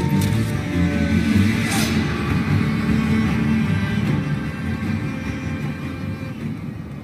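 No technical faults are audible.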